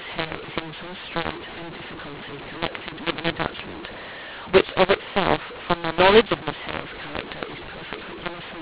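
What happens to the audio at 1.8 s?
A mu-law and A-law mix-up is present at 1.8 s and runs through the whole clip. The speech was coded as G.711 A-law but decoded as mu-law, so sample levels come out scrambled. The speech sounds harsh and distorted, and pauses fill with noise instead of falling silent.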